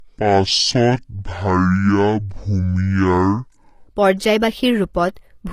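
Throughout, nothing in the speech rises above 14.9 kHz, and the spectrogram shows a hard, flat ceiling there. This is low-bitrate audio saved at a high bitrate, likely a low-rate source re-encoded as high-rate MP3.

From 0.0 to 3.87 s comes a section at the wrong speed. It plays at about half speed and roughly ten semitones low, likely from a clock mismatch. The waveform looks stretched and the harmonics crowd downward.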